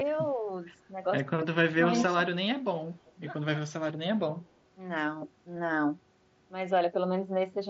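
From 0.33 to 0.48 s the speech level dips briefly and shallowly, by only a few decibels, a mild case of speech suppressed in double talk. The likely cause is the echo canceller meeting simultaneous talk from both ends: unable to separate the near talker from the loudspeaker echo, it pulls the gain down on everything. A far heavier instance follows between 1.29 and 1.86 s, where the attenuation reaches roughly 35 dB for close to half a second, so the speech all but vanishes in patches before recovering.

At 1.97 to 2.15 s a delayed copy of the speech surfaces, trailing by 129 ms and sitting about 10 dB below the direct signal. This is an echo leak, likely from a loudspeaker end whose canceller failed to remove everything its microphone picked up, so the residue was sent back down the line as a short repeat.

At 5.56 s there is a single 7.5 ms gap, a concealed Bluetooth headset packet loss. 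The receiver filled the hole by extending the most similar stretch of the preceding waveform, so the loss is nearly hidden rather than heard as a dropout. The mSBC wideband headset link carrying the audio adds only light graininess on louder passages.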